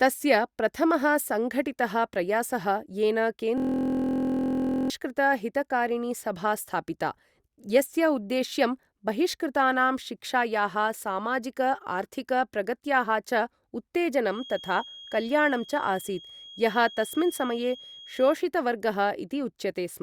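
Just after "प्रथमः सङ्घटितः प्रयासः येन", from 3.58 to 4.90 s, the speech gives way to a steady, coarse buzz at about 43 Hz. This is a system hang loop. The computer or its audio driver stalled while the sound hardware kept replaying the same 23.22 ms slice of its ring buffer, dozens of times over, which fits a 1024-sample buffer. The loop is so short that the repeats fuse into a pitched drone, and about a second and a half of speech is lost beneath it.

From 14.24 to 18.42 s, a thin, steady whistle at 3.3 kHz sits behind the speech, about 20 dB below it and swelling and fading slowly in level. This is a feedback whistle. It is likely caused by the path from loudspeaker back to microphone hovering right at the edge of feedback, so that one high frequency keeps ringing without building up into a full howl.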